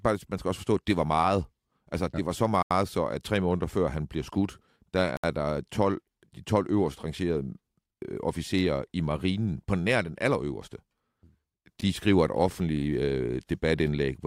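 The speech drops to dead silence three times and then resumes where it stopped: from 2.63 to 2.71 s (about 81 ms), from 5.17 to 5.24 s (68 ms), and briefly at 11.81 s (11 ms). These gaps are likely Bluetooth stalls. Radio interference delayed packets, the headphones' buffer emptied, and playback halted until the retransmitted audio arrived, so each cut is a clean hole, not a fade.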